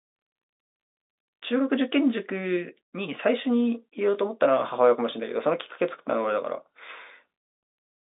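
No technical faults can be heard in the speech, which carries the narrow band of a fixed-line telephone path, from about 250 Hz to 3.7 kHz with nothing above 3.8 kHz, consistent with 64 kbps mu-law G.711 telephone coding working as intended.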